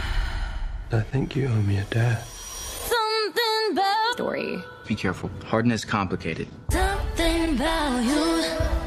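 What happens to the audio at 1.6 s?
Nothing goes wrong at 1.6 s; the audio is intact at that point.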